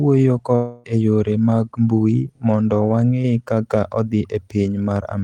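Speech clip: from 0.55 to 0.86 s the sound smears into a fading buzz, then resumes with about 0.28 s gone, likely a long network dropout.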